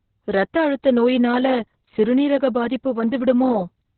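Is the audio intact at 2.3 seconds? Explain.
No. Heavy Opus voice compression runs through the whole clip. Its narrowband SILK coding leaves nothing above 4.2 kHz, which fits a very low bitrate around 6 kbps. Coarse excitation adds a hoarse, slightly robotic roughness that a plain low-pass filter would not produce.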